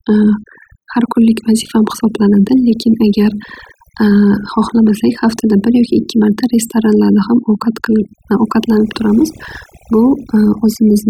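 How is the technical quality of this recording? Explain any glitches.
Overdone noise removal runs through the whole speech clip: pauses fall to near silence flecked with twinkling specks. A noise reducer set too strong shuts down bands near its noise estimate, taking quiet speech detail with them.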